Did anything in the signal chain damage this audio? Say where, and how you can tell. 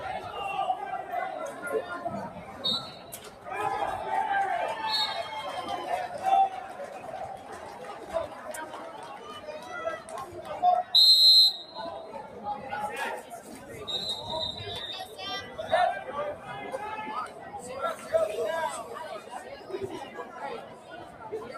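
Yes. A noise suppressor applied to music or sounds runs throughout, in the call-processing stage. A suppressor tuned for speech treats sustained, non-speech content as noise and keeps riding its gain, so level swings of around 10 dB make the sound pump and thin.

Sound cut by the noise suppressor appears at 2.29–2.59 s, 2.96–3.47 s, 6.69–8.10 s, 8.28–8.46 s, 8.93–9.18 s, 12.03–12.35 s and 20.63–21.22 s. At each of these, steady or decaying material sinks by about 5 dB (about 4 dB at 12.03 s) while sharper onsets pass, and tails are clipped short.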